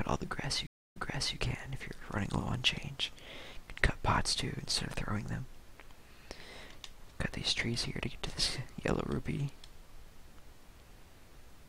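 At 0.67 s a stream reconnect breaks the audio: the connection drops, about 0.26 s of silence follows, and a fresh decoder picks the stream back up. Playback resumes roughly 0.44 s earlier than where it stopped, so a short stretch repeats before normal flow returns by 1.37 s.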